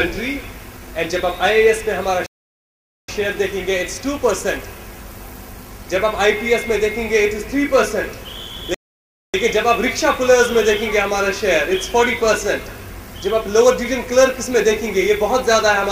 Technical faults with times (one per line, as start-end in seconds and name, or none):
2.26-3.08 playback stall
8.74-9.34 playback stall